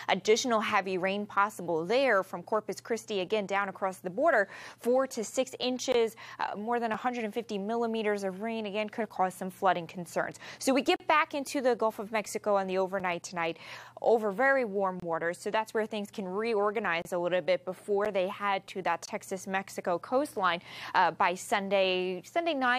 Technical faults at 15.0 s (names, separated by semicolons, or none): gap between stream segments